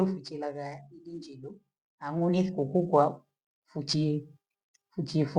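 A speech recording in which voice and background noise swell together from 2.0 to 3.03 s, climbing by about 5 dB over roughly a second. This is automatic gain rising: the gain control judged the input too quiet and raised its level gradually.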